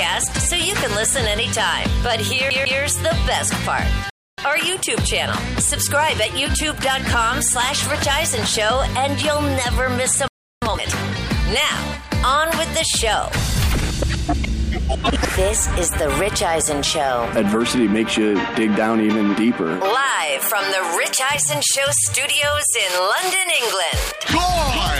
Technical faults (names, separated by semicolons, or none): CD stuck on one turn; playback stall; time-compressed catch-up